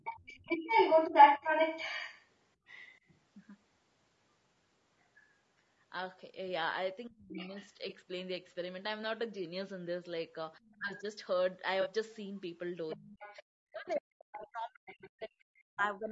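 Low-delay AAC compression runs through the whole clip and is plainly audible: the speech sounds rough and grainy, with noise between the harmonics. The likely cause is AAC-ELD at 32 kbps, whose short frames resolve pitch poorly. The audio also stops at 8 kHz, which is ordinary call microphone processing.

The other side's voice leaking through is heard from 0 to 3.2 s. It comes in roughly 5 dB louder than the speech itself, most likely echo that the canceller failed to remove.

AAC frame loss with concealment follows at 1.97 to 2.00 s. One 20 ms frame is rebuilt from the previous spectrum, leaving a brief smeared, noisy patch.

At 5.0 s there is a faint scrap of leaked far-side voice, about 40 dB below the speech.

Speech suppressed in double talk appears at 7.08 to 7.55 s. The voice dips by up to about 40 dB for roughly 0.4 s, likely because the canceller ducked everything while both sides spoke. 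Leaked voice runs under it from 7.35 to 7.73 s at about 10 dB down.

Another concealed frame loss at 7.89 to 7.93 s smears a 20 ms stretch.

At 10.59 to 11.06 s the speech is pulled down again by about 20 dB over around 0.2 s. An echo about 30 dB down sits under it at 10.62 to 10.77 s.

The longest concealment, at 11.81 to 11.87 s, covers two lost frames, about 40 ms, and sounds phasey and blurred.

From 12.89 s the far-side voice leaks in at about 15 dB below the speech. It continues to 15.87 s.

From 12.95 s to the end the speech is suppressed by up to about 40 dB for around 3 s. It dips under that competing voice.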